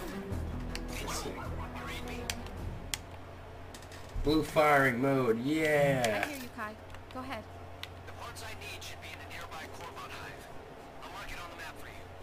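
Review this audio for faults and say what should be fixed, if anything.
Sample clock jitter runs throughout: a roughness around 25 dB below the signal, from timing wander near 10 µs. Unlike a steady noise floor, it swells on loud, bright passages and disappears in silence. Use a stable, low-jitter clock source for conversion.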